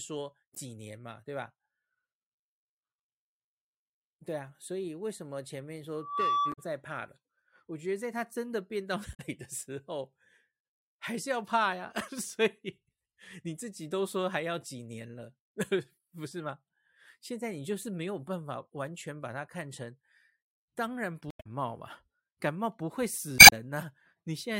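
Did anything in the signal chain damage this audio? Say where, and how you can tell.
Yes. The codec stage shows damaged data in a compressed stream: brief glitches at 0.54–0.58 s, 6.49–6.59 s, 9.11–9.20 s, 21.28–21.47 s and 23.36–23.53 s, where the last adds about 26 ms. Corrupt bytes made the decoder misread frames and resync. Unlike a network dropout, these come from damaged data inside the stream itself.

A loudspeaker feedback squeal enters at the acoustic or analogue stage, before capture. From 5.95 s to 6.70 s a single 1.2 kHz tone swells over roughly a third of a second to around 10 dB above the speech. The microphone was picking up its own loudspeaker. Unlike a steady interference tone, it builds from nothing.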